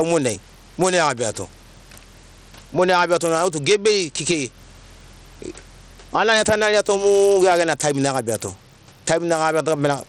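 Gain pumping runs through the whole recording: the room noise sits about 43 dB below the speech, and the gain swings by around 10 dB. The likely cause is input gain set far too high, with a fast limiter clamping down on each peak.

Bluetooth SBC compression also colours the entire recording, and the damage is plainly audible. Nothing sounds above 16.1 kHz, the remaining treble flickers, and a gritty, coarse grain rides on the speech. This fits a low SBC bitrate of roughly 80 kbps, which is likely starving the upper sub-bands of bits.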